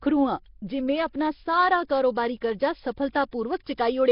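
From start to finish the speech carries a rough, hissy halo and a smeared, underwater character, with nothing above 5.3 kHz. The damage is heavy and points to Nellymoser compression, likely the Nellymoser Asao codec at a rate that fits roughly 22 kbps. The codec quantises each short block coarsely and starves the weaker bands, which are then filled with noise, so the spectrum turns grainy and thin.

At 3.13 s a pre-echo lasting about 22 ms precedes an attack, and another follows at 3.31 s, spreading about 15 ms. Each is a brief hiss just before a sharp onset. The transform block containing the attack distributes its quantisation noise across the whole block, so noise sized for the loud part leaks into the quiet moment ahead of it, leaving the onsets soft and smeared.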